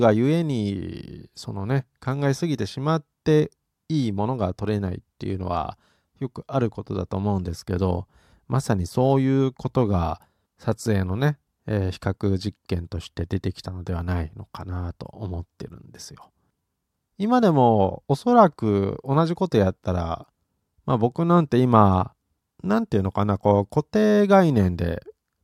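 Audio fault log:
No faults heard anywhere in the speech.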